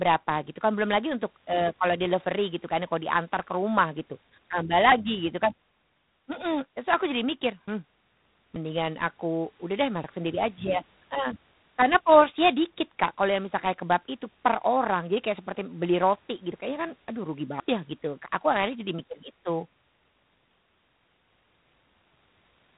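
A harsh, rasping hiss runs through the whole speech, swelling and fading with its level, and nothing reaches above 3.8 kHz. This is G.726 ADPCM at 24 kbit/s: with only three bits per sample to code the difference from the codec's adaptive prediction, the coding error is plainly audible.

Sudden jumps in the sound occur at 4.92 s, between "ke rumah gitu tambah" and "gitu kan", then at 8.56 s and 16.52 s, and at 17.6 s, between "kan aduh rugi" and "ya gitu". Each is likely a dropped buffer (overrun), with the two sides of the lost piece joined directly and no silence left in its place. Around 40 ms goes at 4.92 s and 16.52 s, about 70 ms at 8.56 s, and about 100 ms at 17.6 s.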